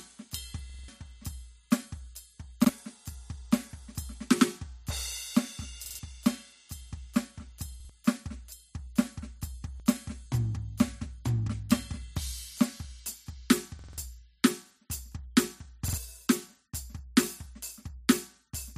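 Music with repeated buffers: the same roughly 46 ms slice stutters at 0.70–0.88, 2.65–2.69, 5.85–5.99, 7.80–7.90, 9.75–9.80, 13.79–13.98 and 15.88–15.98 s, which fits a 2048-sample buffer replayed when fresh audio arrived late. The waveform and spectrogram show identical back-to-back blocks with hard vertical seams.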